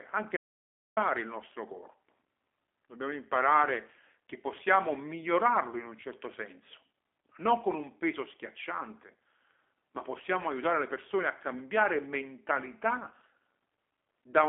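A speech recording carrying plainly audible G.729 codec damage throughout. The sound is confined to a telephone band of roughly 300 Hz to 3.5 kHz, with nothing at all above 3.6 kHz. The voice has a rough, slightly synthetic edge, which fits an 8 kbit/s G.729A path that rebuilds speech from a filter model and a few pulses per frame. Plain band-limiting would sound dull but smooth. This sounds rough and artificial.

From 0.37 s to 0.97 s there is an audio dropout to silence lasting about 0.6 s, in which the signal drops to silence with no room tone underneath. That silent gap and the abrupt cut and return mid-flow set it apart from a quiet pause or a noise gate, which would leave some floor or fade. The likely cause is a brief loss of the input, such as a disconnect or stray mute, while recording continued.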